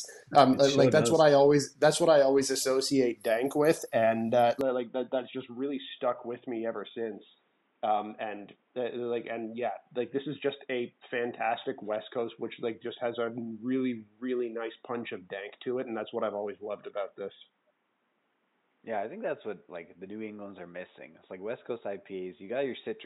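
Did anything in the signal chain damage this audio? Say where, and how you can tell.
Yes. At 4.61 s the input was likely switched to a poorer device at the driver level, and the capture stays on it to the end. From that moment nothing above 3.8 kHz survives, so the sound abruptly turns dull and boxy, with no gap at the changeover. The level also falls by a few decibels, and a faint new background noise appears, around 45 dB below the signal, carrying the second device's own tone.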